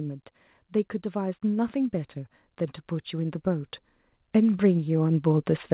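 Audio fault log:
1.12–2.22 s and 4.32–5.58 s, automatic gain rising: gain control lifts a quiet input, so speech and background swell together, by about 4 dB, then about 5 dB.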